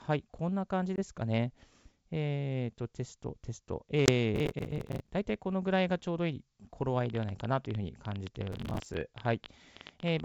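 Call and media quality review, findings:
Packet loss on the ADPCM call at 0.96–1.00 s and 4.06–4.10 s. A 20 ms hard-edged silent hole each time, about one packet. The decoder's predictor and step size lose sync with the sender, so speech returns slightly distorted before settling.

Processor overload crackle at 4.34–5.11 s and 8.52–8.94 s. Gritty tearing over the speech. Missed deadlines replay stale audio in chunks that fit a roughly 10 ms buffer, with dozens missed in a row. Clears when the load drops.

Train of clicks from 7.06 s to 10.21 s. Around 12.4 per second, irregularly spaced, roughly forty in all. Peaks about 10 dB above the speech, audible in pauses too. Likely interference from nearby equipment or a faulty connection or power supply. Overlaps the 8.52 s crackle. The G.722 wideband path at 64 kbit/s is not implicated.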